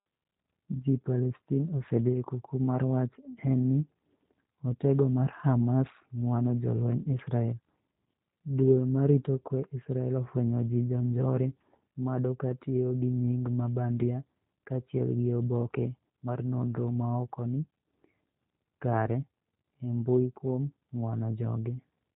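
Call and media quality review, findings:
Speech rough and faintly synthetic for the whole clip, 0 to 22 s, plainly audible. Top end gone, nothing above 4 kHz, so sibilants dull and muffled. Probable component: G.729 codec, sound fits the 8 kbit/s G.729A variant. Mechanism: each 10 ms frame rebuilt from a vocal tract filter, a pitch predictor and a sparse four-pulse excitation per half-frame, not from the waveform itself, hence the coarse, artificial grain.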